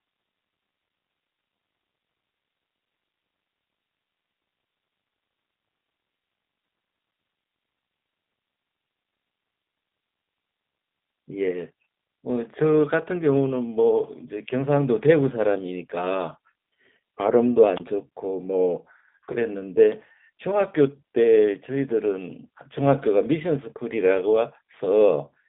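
G.729 codec coding runs through the whole speech clip: the voice is rebuilt from a filter, pitch and sparse pulses, which fits 8 kbit/s, leaving it audibly rough, synthetic and confined to about 200 Hz to 3.7 kHz.

A wireless microphone squelch dropout occurs at 17.75–17.80 s: the radio link faded and the receiver muted, leaving a hole of near silence about 25 ms long.

VoIP packet loss concealed by the speech codec follows at 19.32–19.37 s: 20 ms of audio, pointing to one lost packet, was filled by extrapolation, giving a brief stretch that fades.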